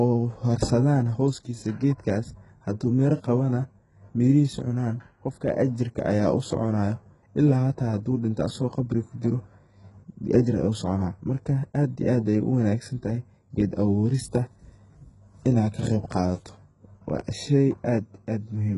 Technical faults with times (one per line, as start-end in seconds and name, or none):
0.00-18.77 HE-AAC compression